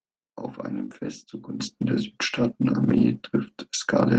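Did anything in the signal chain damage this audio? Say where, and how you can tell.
Yes. From 1.6 s right to the end, the sound and the background noise jump up together by about 12 dB in one step. That's a sudden gain jump, and the likely cause is a digital gain change in the processing stage applied instantly instead of ramped.

Between 2.43 and 2.53 s, about 60 ms of audio turns rougher and noisier with no gap. That points to a lost packet rebuilt from error correction at the network stage. A few Opus packets seem to have gone missing, and the decoder played the low-bitrate backup copies instead.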